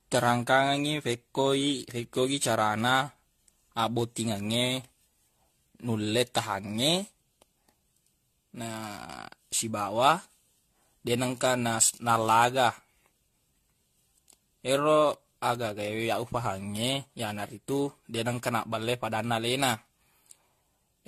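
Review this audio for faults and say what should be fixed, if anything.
Generation loss runs through the whole recording: the speech has likely been decoded and re-encoded with a lossy codec around ten times, with each pass quantising again on a shifted frame grid so the errors pile up. The speech sounds swirly, hollow and smeared, consonant attacks blur, and nothing remains above 14.1 kHz, which fits an AAC-LC chain at about 64 kbit/s. Keep a lossless master and encode to the lossy format only once, at the final delivery step.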